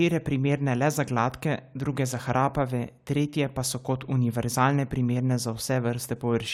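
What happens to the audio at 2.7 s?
Nothing goes wrong at 2.7 s: the speech there plays through intact, with no dropout, click or distortion to be heard.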